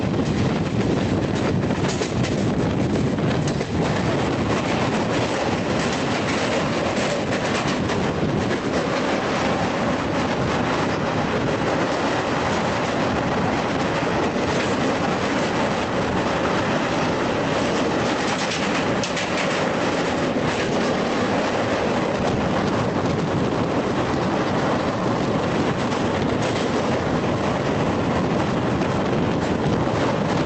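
Gain pumping runs through the whole clip. The input gain is likely set far too high, so a fast limiter clamps down on every loud sound. The gain swings by about 5 dB under each peak, leaving the sound squashed, with the call codec's top end stopping near 8 kHz.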